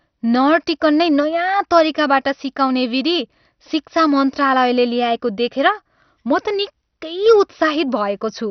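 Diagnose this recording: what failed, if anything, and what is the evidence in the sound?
Throughout the speech the sound is dull and muffled, with a gurgling, grainy roughness and nothing above 6.2 kHz. At the codec stage, likely MP2 compression starved of bits, upper sub-bands are switched off and the remaining ones coarsely quantised, consistent with roughly 48 kbps.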